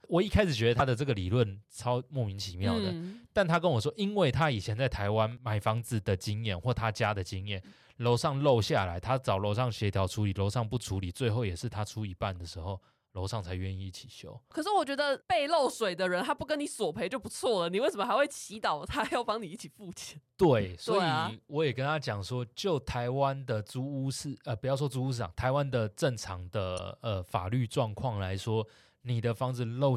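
Damaged data in a compressed stream corrupts two stretches of this speech, from 0.78 to 0.81 s and from 26.75 to 26.80 s. The decoder misreads the bad frames and loses sync, so each spot comes out as a brief chirp or blip.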